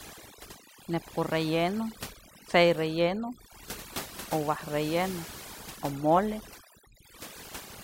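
Throughout the speech, the background drops and breaks up into twinkling specks: overdone noise removal gating frequency bands near the noise floor.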